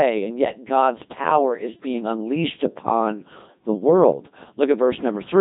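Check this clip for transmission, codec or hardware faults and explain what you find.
The speech has passed through a Codec 2 vocoder, and the damage is heavy across the whole clip. Codec 2 does not keep the waveform. It sends only pitch, voicing, energy and a coarse spectral envelope, and the decoder rebuilds the voice from summed sine waves. The result sounds robotic and buzzy, with nothing above 3.8 kHz. The degree of degradation fits a rate of about 2.4 kbit/s.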